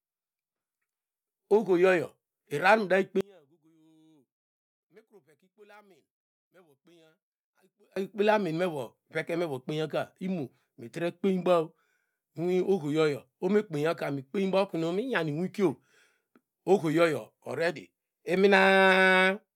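Speech recording. From 3.21 to 7.96 s the voice nearly vanishes, dropping about 33 dB in mono. One channel inverted is the likely cause, cancelling the shared centre.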